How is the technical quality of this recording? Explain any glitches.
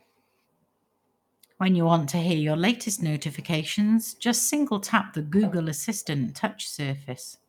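The recording has a steady timing fault: the sender's clock runs slower than the receiver's, and the receiver keeps patching the speech to cover the gap.

Clock drift between sender and receiver: throughout the clip the sender runs roughly 4% slow, so the jitter buffer keeps draining. On the waveform this shows as uneven little timing stumbles across the whole clip.

Repeated timing corrections: from 0.12 to 7.41 s the receiver repeats short fragments, playing at 96% speed and adding about 300 ms overall. This is heard as faint hiccups and a dragging tempo, with small duplicated segments and seams in the spectrogram.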